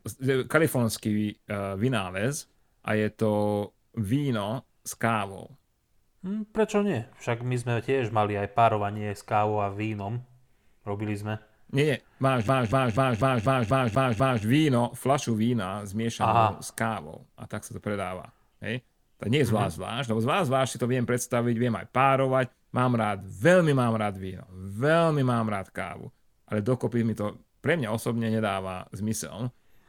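At 12.48 s the speech locks into a CD stuck on one turn. A scratch keeps throwing the laser back one track at the same point on the disc. The same slice of about 246 ms plays eight times, each pass cut by a brief mute at the jump. The result is a fast, even stutter. It runs until 14.44 s, then releases into "víno flašu vína zmiešanú".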